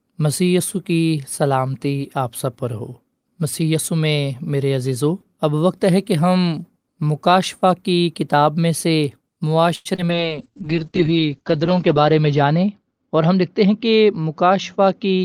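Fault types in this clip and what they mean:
Short stall from a late packet: at 9.75 to 9.87 s a packet arrived late, the jitter buffer emptied, and the receiver held the last speech sound for about 99 ms before resuming at the same point, so nothing is lost but the sound drags.
Skip ahead: at 9.95 to 10.00 s roughly 70 ms of speech was discarded while later audio was already queued, so playback jumps forward, with the two sides joined almost directly after a brief 27 ms fill, trimming around 50 ms of delay.
Short concealed packet loss: at 10.06 to 10.10 s about 20 ms of audio never reached the decoder in time, and the receiver bridged it with 24 ms of extrapolated sound continuing the previous speech, heard as a brief smear before blending back into the real signal.
Jitter buffer slow-down: from 10.11 to 10.69 s the receiver rebuilt its reserve by repeating small pitch periods and pause fragments, adding 57 ms, so the speech runs at about 91% speed with unchanged pitch and slightly drawn-out sounds.
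Call bitrate drop: from 10.13 s to the end the encoder was cut from 32 to 8 kbps as the bandwidth estimate fell, with audio bandwidth narrowing from 20 kHz to 8 kHz, so the speech turns coarser and duller, sitting at the lowest rate for about 1.3 s.
Jitter buffer speed-up: from 13.2 to 15.06 s the buffer held more than its target, so the receiver removed short pitch-period pieces repeatedly, about a tenth of a second in total, making the speech run about 5% fast at the same pitch and sound slightly hurried.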